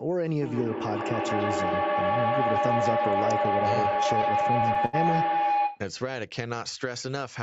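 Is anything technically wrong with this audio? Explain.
Yes, two faults overlap in this speech clip.

Feedback howl runs from 0.42 to 5.92 s: sound circulating between a loudspeaker and a nearby microphone gains level each pass, settling into a tone near 700 Hz, peaking about 4 dB above the speech and pulsing roughly every 150 ms. A spectrogram shows a bright horizontal band with regular throbs.

Repeated stalls (stutter) appear from 3.73 to 4.95 s. Late-arriving audio kept emptying the playback buffer, so the receiver stretched the last sound through about a dozen brief waits, the longest 76 ms. Nothing is lost, but delivery drags and hiccups, with smeared repeats visible on the waveform.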